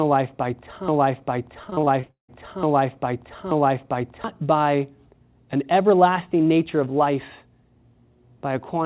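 From 0.88 s to 4.24 s, right after "life by", the playback likely stalled and kept re-sending the last fragment it held. This is a broken-record loop: a piece about 0.88 s long plays four times back to back with no variation. Whatever should have followed in those seconds never arrives, so the sound seems stuck in place until it breaks free at 4.24 s.

Inside that loop, from 1.64 s to 2.30 s, comes repeated packet loss (robotic sound). Eight separate gaps open in quick succession. Each is patched by stretching the preceding sound, so about half of this short span is concealment rather than real signal. About 340 ms of audio is missing in total, and the longest single hole is about 177 ms. The result is choppy, with pieces missing, heard through the narrow G.711 call band that carries nothing above 4 kHz.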